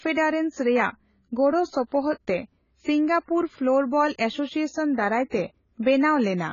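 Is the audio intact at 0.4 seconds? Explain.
No. At 0.4 s the speech is still carrying the AAC compression damage heard across the whole clip, likely from AAC-LC coding at a starved bitrate, with heavy artefacts that point to something near 16 kbps. Starved of bits, the encoder discards everything above 7 kHz and quantises the remaining bands coarsely, leaving gaps. The speech sounds dull and smeared, with a warbling, fizzy texture on sibilants and held sounds.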